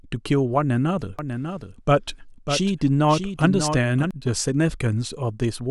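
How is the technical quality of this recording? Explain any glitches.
The recording has one glitch, a doubled audio track. From 1.19 s to 4.11 s, a second copy of the speech runs about 700 ms behind, somewhat quieter, with no room colour. It starts and stops abruptly. A slower capture path likely recorded the same audio twice.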